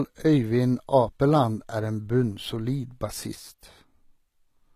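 From the start, the speech has treble that sounds rebuilt rather than recorded. S sounds and other high detail come out gritty and metallic, and nothing reaches above 14.9 kHz. That points to HE-AAC compression at a low bitrate, fitting roughly 20 kbps. Spectral band replication copies lower bands upward, unlike plain low-pass filtering, which would leave a dull top.

At 3.35 s the level falls abruptly by about 6 dB and stays down to the end. Tone and treble character are unchanged, which sets it apart from a fade or filtering. The likely cause is one channel dropping out of a stereo pair carrying the same sound.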